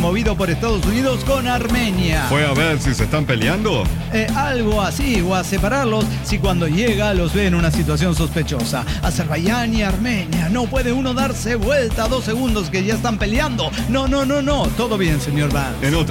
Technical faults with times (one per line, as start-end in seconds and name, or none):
none